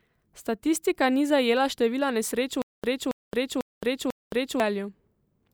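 At 2.62 s, right after "zajela števila nesreč v", a stutter with silent gaps runs until 4.60 s: a 277 ms burst of speech repeats four times, each followed by about 219 ms of digital silence, a 495 ms cycle. The likely cause is a stalled stream replaying its last fragment, so the speech meant for that stretch is lost.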